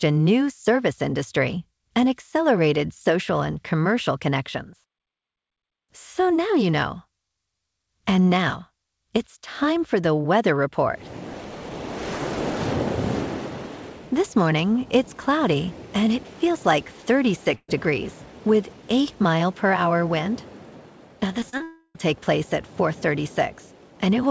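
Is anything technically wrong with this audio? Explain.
Yes, there are three kinds of network fault, heard through a call path whose spectrum stops at 8 kHz, which fits G.722 at 64 kbps.

From 17.55 to 17.69 s there is a burst of packet loss. About 130 ms of audio never arrived in time, so the receiver extended the last sound and faded it. It is heard as a held buzz or hiss that dies away, with about 40 ms of silence at its tail, before the audio resumes further along. On a spectrogram the harmonics or noise run as flat, smeared bands that dim to a blank strip. The waveform shows a repeating, shrinking pattern.

Three short concealed packet losses fall at 21.40 to 21.43 s, 21.50 to 21.54 s and 21.58 to 21.61 s, each losing 20 to 30 ms. Each time the decoder bridged the hole by continuing the preceding pitch or noise and then crossfading back into real audio. They sound like quick smears or wobbles, and brief transients can disappear. 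A spectrogram shows small blurred patches where fine detail briefly freezes. In the waveform, short stretches look unnaturally periodic.

Right after, from 21.63 to 21.96 s, comes a long dropout, likely a network dropout. About 320 ms is missing. The decaying buzz or hiss that fills it lasts nearly the whole span, then about 30 ms of silence before the sound returns. The spectrogram shows a stretched, fading smear ending in an empty gap, and the waveform shows a tapering envelope that drops to a flat line.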